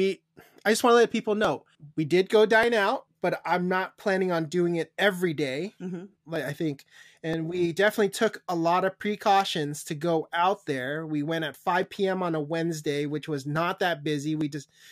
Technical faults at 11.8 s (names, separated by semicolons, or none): dropped samples